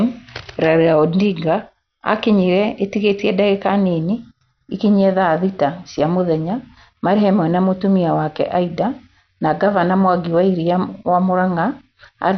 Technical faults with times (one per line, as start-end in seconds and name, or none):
0.00-12.38 MP2 compression